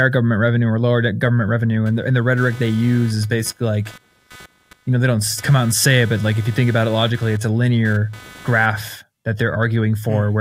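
Computer activity noise runs from 1.86 s to 8.95 s, beginning just after "or lower government revenue". A buzzy, pulsing whine at roughly 300 Hz sits about 25 dB below the speech, rising and falling independently of what is being said. It comes from the computer's changing processing load disturbing the ground shared with the audio input, so electrical interference from the machine's work leaks into the recording as a chirping, scratchy buzz.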